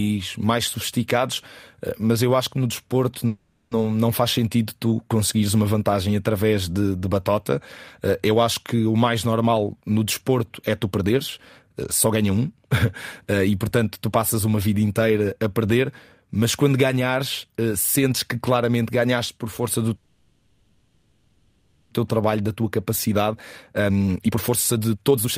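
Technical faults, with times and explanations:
3.27–3.73 s, call audio freeze: after "acho que no desporto" the sound stalls and a fading buzz fills about 0.44 s, likely because packets were held up and the jitter buffer ran empty. Speech resumes intact with "não faz sentido tu". On a spectrogram, smeared harmonics fade out, with a brief silent notch just before the restart.
9.45–12.54 s, jitter buffer speed-up: after "acho que o mais" the speech runs at about 114% speed with unchanged pitch and sounds hurried. The buffer was over its target, so short pitch-period chunks totalling roughly 0.4 s were cut. The waveform shows periodic cycles spliced out, and syllables are compressed in time.
19.96–21.93 s, call audio freeze: after "ganhaste por força do" a fading, buzzy continuation of the last sound fills about 1.95 s without falling fully silent, likely from delayed packets draining the jitter buffer. 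Nothing is lost, and speech picks up where it stopped. A spectrogram shows a long, blurred, decaying band.
22.17–22.64 s, 23.08–23.32 s and 23.72–25.38 s, jitter buffer speed-up: after the long freeze the backlog is cut in bursts at 112%, 113% and then 163% speed. The first two remove only tens of milliseconds, and the last removes about a second, so the final stretch sounds rushed at normal pitch. Dense pitch-period splices show in the waveform.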